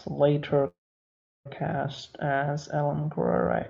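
At 0.67 s a call audio freeze sets in, lasting until 1.47 s: a brief fading tail of the last sound, then about 0.7 s of silence. The likely cause is a jitter buffer running dry while packets were held up. Unlike a dropout, nothing is lost; the speech resumes exactly where it stopped, just 0.78 s later, with the call codec's band limit of about 8 kHz still audible.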